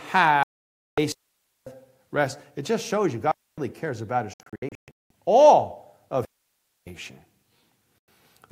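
At 0.43 s the speech hits a digital broadcast dropout. The receiver mutes for about 0.55 s, to 0.98 s, because the frames arriving in that span are rejected, which fits roughly 17 frames of 32 ms. The waveform shows a flat line and the spectrogram a blank vertical band.

From 1.12 to 1.67 s comes a digital wireless dropout, as the radio link loses too much data and the receiver fades out within a few milliseconds. The result is a clean hole of about 0.54 s of near silence with no noise burst at either edge, seen as a sharp-edged empty column.

A second wireless dropout follows from 3.31 to 3.58 s, a shorter mute of about 0.26 s with the same abrupt, noise-free edges.

From 4.34 to 5.11 s the broadcast dropout returns in a scattered form. About 0.54 s of audio is lost in several short holes spread over 0.77 s, the longest lasting 0.19 s. This produces a stuttering, chopped stretch, seen as a row of gaps in the waveform and striped blanks on the spectrogram.

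The third wireless dropout runs from 6.25 to 6.87 s, a clean mute of about 0.62 s.

A final broadcast dropout at 8.08 s cuts the sound briefly, leaving a narrow silent slice.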